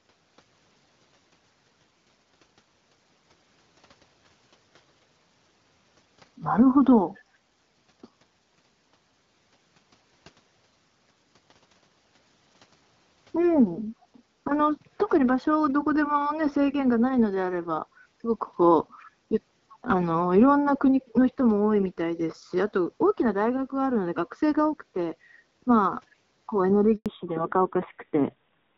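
Echo leak at 14.01–14.06 s, 19.0–19.04 s and 19.7–19.75 s: brief, very faint delayed copies of the speech, about 377 ms late and growing louder each time, likely from a far-end loudspeaker whose echo canceller let residue through. Handover gap at 26.96–27.06 s: the speech drops out for 100 ms as the call switches networks and no frames arrive. Fallback to narrowband from 27.06 s onward: everything above 4 kHz disappears, leaving the speech duller and rougher, which fits a drop from HD Voice to a narrowband codec around 7.4 kbit/s.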